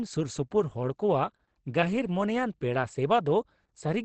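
Throughout, the speech sounds muffled and hoarse, with nothing above 8.7 kHz. This is likely Opus compression in speech mode, at a low bitrate near 16 kbps.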